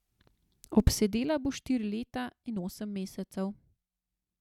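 Speech clip, no technical faults detected.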